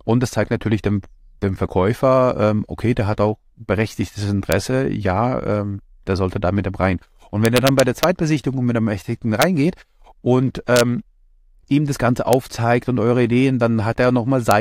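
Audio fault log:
4.52, 7.45–8.04, 9.42, 10.76–10.81, 12.33 and 14.51 s, integer overflow: a gain or summing stage lets loud peaks run past the largest integer value, and instead of being held at the limit the samples wrap around to the opposite sign. Each peak that barely exceeds full scale, by about 1 dB at most, is flung across the whole range, producing violent, sharp cracks far harsher than clipping.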